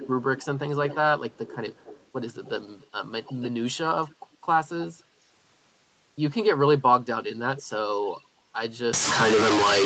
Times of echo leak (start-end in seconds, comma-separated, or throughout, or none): 0.00-0.46, 0.88-0.97, 1.29-2.07, 3.24-4.15, 7.37-7.63, 8.05-8.25